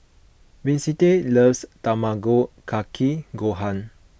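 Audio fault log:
No technical faults detected in this speech recording.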